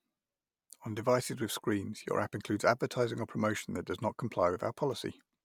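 No technical faults can be heard at any point in the recording.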